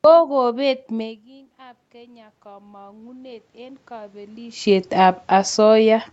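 From 0.92 to 4.6 s, automatic gain rising: after a drop of about 24 dB, gain climbs about 12 dB, swelling voice and room noise.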